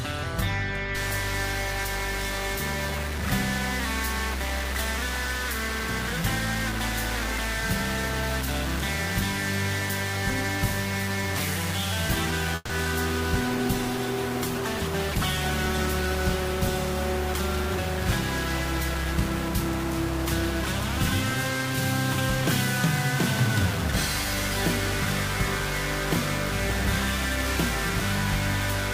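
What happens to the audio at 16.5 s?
At 16.5 s two faults overlap. A call bitrate drop runs from 13.45 s to 19.87 s: the call's bandwidth estimate fell and the encoder went from 96 kbps to 23 kbps, holding the lowest rate for about 3.35 s. The coarser coding and lost high frequencies make the audio sound rough, watery or muffled. Underneath, from 0.95 s to the end, there is distortion with noise filling the quiet gaps, likely a stuck bit, where one data bit held at a fixed value throws about half the samples off by that bit's weight.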